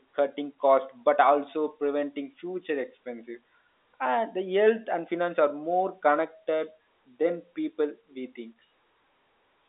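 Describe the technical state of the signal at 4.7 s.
At 4.7 s the speech is intact, with no fault present, only the narrow telephone band of normal G.711 coding, which passes nothing above about 3.8 kHz.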